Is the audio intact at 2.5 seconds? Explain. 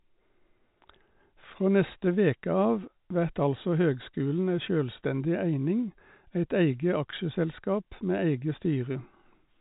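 Yes, the audio at 2.5 seconds is intact, with the speech carried cleanly through G.711 telephone coding and nothing heard above about 3.8 kHz.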